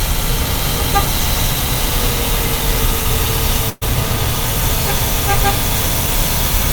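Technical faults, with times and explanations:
3.69 to 3.83 s, burst of packet loss: about 120 ms never arrived, so the receiver stretched the last sound into a fading tail, then skipped ahead.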